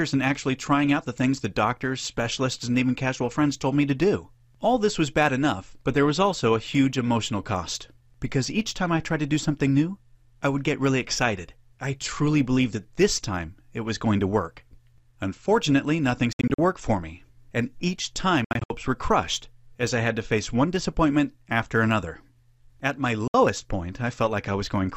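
Likely Bluetooth dropouts, where audio packets missed their delivery window to the headphones and were discarded. From 16.33 to 16.59 s and again from 18.44 to 18.70 s, the sound breaks into a stutter of short silences, about 150 ms and 170 ms lost in total across each quarter-second span, with no single gap longer than 64 ms. At 23.28 s a single 64 ms hole opens. Each time, the sound resumes as though it had kept playing.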